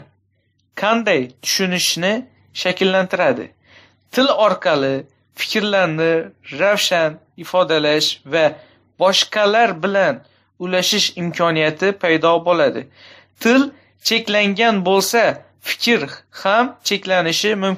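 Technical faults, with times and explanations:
Throughout: transcoding between lossy codecs, with the artefacts of both codecs heard together and nothing above 15.2 kHz; the spectrogram shows a hard ceiling and patchy bands, likely an MP3 at a low bitrate re-encoded to WMA.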